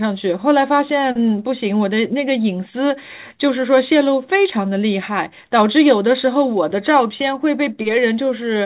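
Nothing in this speech recording stands out as a technical fault. It has come through a call path, with nothing above 4 kHz, which fits a narrowband telephone codec such as G.711 mu-law.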